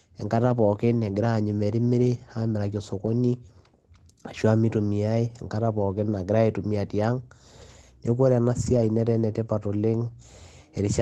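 At 0.97 to 1.03 s, and again at 8.73 to 8.83 s, the sound turns briefly rough and grainy with no dropout: a lost packet rebuilt from error correction. Each lost stretch was replaced by a coarse low-bitrate copy carried in the next packet. The first repair sounds like about 40 ms of audio, consistent with two 20 ms packets. The second is longer, about 60 ms, fitting three. The audio runs through an Opus call path limited to about 12 kHz.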